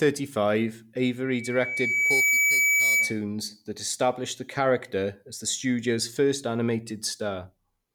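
From 1.25 s to 3.21 s, a loudspeaker feedback squeal rides over the speech. A single tone near 2.3 kHz appears and swells over roughly a second until it sits a little louder than the voice. The microphone is hearing the loudspeaker it feeds. At that frequency the loop gain tops one, so the tone keeps feeding itself. It ends just before "that established the character."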